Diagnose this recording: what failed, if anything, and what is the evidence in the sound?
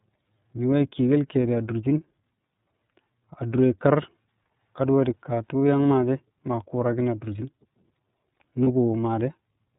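The whole clip has gone through the iLBC codec at the codec stage. There's nothing above 4 kHz, and the speech has a plainly rough, slightly synthetic grain. That sound fits the 13.33 kbps mode with 30 ms frames, where each frame's excitation gets coded on its own.

There are lost iLBC frames at 8.64 to 8.68 s, a network problem. The gap sounds like one missing 30 ms frame. The decoder filled it by repeating the last pitch cycle with some noise, so you hear a brief buzzy held vowel. Because iLBC frames stand alone, the speech recovers right after.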